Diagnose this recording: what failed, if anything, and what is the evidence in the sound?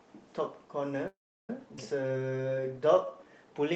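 From 1.07 to 1.50 s the speech stops with a brief fading tail, then near-silence, and resumes intact: a call audio freeze, likely network delay emptying the jitter buffer.

At 1.76 to 1.78 s the speech jumps forward, losing roughly a seventh of a second: a skip ahead, where a stretch of audio was dropped, in transit or by an overflowing jitter buffer, while later audio was already waiting.

From 2.01 to 3.25 s speech runs slow, at 87% speed, at unchanged pitch, adding 170 ms: jitter buffer slow-down, repeating pitch periods to rebuild its reserve.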